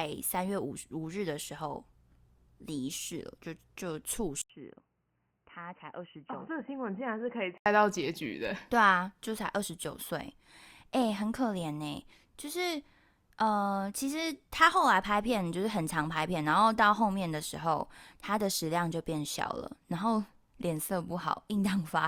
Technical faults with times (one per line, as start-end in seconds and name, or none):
4.42-7.66 input switched to a poorer device